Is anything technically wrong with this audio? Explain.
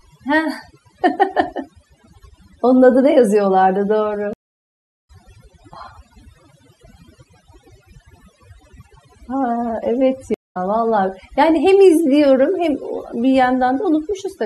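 Yes, there are two problems. Overdone noise removal runs through the whole speech clip. The noise reducer was set too aggressively, so it removes frequency bands that sit near its noise estimate, taking quiet speech detail with them. The background drops and breaks up into twinkling specks. On a spectrogram this shows as a blotchy, holed texture with isolated specks between phrases.

There are also two stream reconnects. From 4.33 s to 5.10 s the audio drops out for about 0.71 s and comes back roughly half a second further on. From 10.34 s to 10.57 s a 0.16 s gap resumes roughly a tenth of a second later. Each time the connection broke and a fresh decoder started mid-stream, so speech jumps ahead. The waveform shows silent gaps, with the audio fading back in as it restarts.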